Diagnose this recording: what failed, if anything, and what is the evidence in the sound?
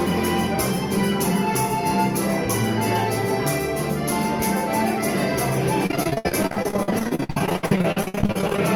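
Network stage, pretty clearly: there's a run of repeated packet loss (robotic sound) from about 5.86 s to 8.59 s. Across that stretch the audio turns choppy, with dozens of short holes, the longest around 71 ms. The receiver is covering each dropout by stretching out the last bit of sound it got, and nearly half of the span ends up as that patched-in filler, which is what gives it the robotic edge.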